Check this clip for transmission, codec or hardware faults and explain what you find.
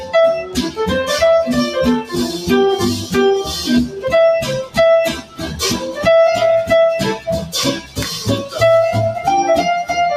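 There's a processing fault rather than a transmission or hardware one: a noise suppressor applied to music or sounds runs through the whole clip. It's a speech-oriented suppressor treating sustained content as noise, so level swings by around 10 dB and held parts pump and thin.

On top of that, there are four spots of sound cut by the noise suppressor, at 0.44 to 0.78 s, 3.87 to 4.03 s, 5.13 to 5.61 s and 7.77 to 7.98 s. Each one sinks by about 8, 8, 13 and 11 dB.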